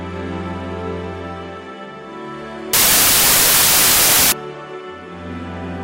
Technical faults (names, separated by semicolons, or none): wrong sample width